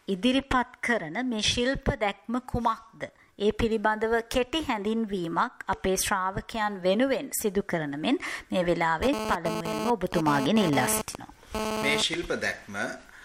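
From 9.03 to 12.14 s there's GSM phone buzz: a 2G handset nearby was pulsing its transmitter about 217 times a second during a data transfer, and the audio circuitry rectified those bursts. You get a hard, raspy buzz, rich in harmonics, sitting only about 3 dB under the signal.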